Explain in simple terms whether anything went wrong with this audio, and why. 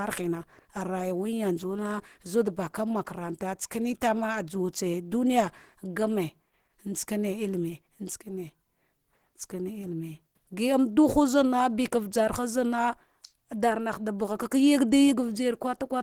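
The speech carries a rough, hoarse, grainy quality from start to finish, the signature of Opus compression, likely the cause. Opus saves space by describing each frequency band's overall energy rather than every detail, filling the gaps with approximations. At a tight budget it switches to a speech-oriented hybrid mode, and here that trade-off is plainly audible as a coarse, noisy texture, even though the high frequencies are still present.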